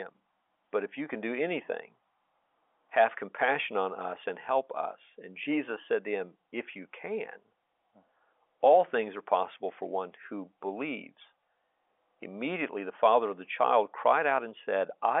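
No faults detected; the speech sits in the usual telephone band of roughly 300 Hz to 3.5 kHz with nothing above 3.7 kHz, consistent with 64 kbps G.711 A-law coding.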